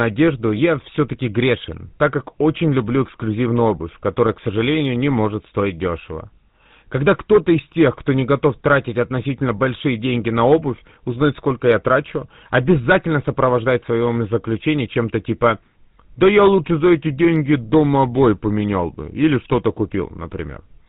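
Speech, and the whole thing has been through the GSM full-rate codec, the old original GSM mobile phone coder. The roughness is plainly audible: there's that buzzy, gravelly grain, because the codec rebuilds the voice from a vocal-tract model driven by regularly spaced pulses, keeping only every third excitation sample. Nothing comes through above 4 kHz, so it's boxed-in and dull, and the overall character fits GSM's 13 kbps rate.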